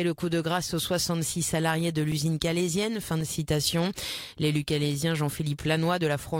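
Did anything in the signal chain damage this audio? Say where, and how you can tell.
Yes, two blocks of digital silence, at 2.12 s and 3.21 s, lasting 2.9 ms and 1.8 ms. That's the driver or buffer stage: the output wasn't filled in time, so samples dropped to zero with hard edges and quick ticks. The first gap fits a 128-sample buffer.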